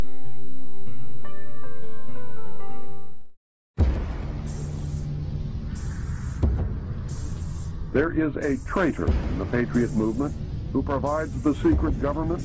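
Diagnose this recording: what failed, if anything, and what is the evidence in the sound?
Nothing in the sound points to a failure at any stage, so there's honestly nothing to diagnose in this recording.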